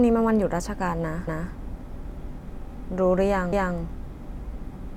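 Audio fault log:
1.27–1.53 s and 3.52–3.78 s: overlapping chunks. The speech is handled in 2-second blocks, and each block starts a quarter second before the last one ended. So 250 ms of sound plays twice at each join. It is heard as a brief stutter.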